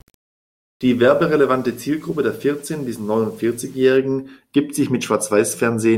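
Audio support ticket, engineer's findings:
Low bit depth without dither, 0.0 to 3.97 s. Grainy distortion riding on the speech, changing with each syllable. Quiet tails turn gritty, faintest parts sputter or drop out. Error floor about 35 dB below signal. Likely cause: requantisation without dither, which fits rounding to 8 bits. Error tracks the signal. Clean after 3.97 s.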